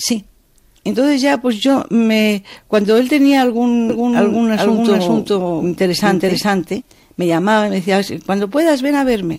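From 3.90 s to 6.82 s a doubled audio track appears: a second full-band copy of the sound trails the original by roughly 400 ms at about the same level, entering and leaving abruptly with no decay or room colouring. The likely cause is a slower second capture path or an out-of-step edit. On a spectrogram, every pattern in that span is repeated as an identical shifted twin; the waveform shows matching shapes offset in time.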